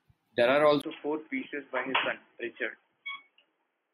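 At 0.82 s there's a 20 ms gap, then the speech turns dull and boxy through to the end, with nothing above 3.3 kHz, a faint new noise floor and unchanged loudness. The likely cause is the input switched to a poorer, narrower-band device.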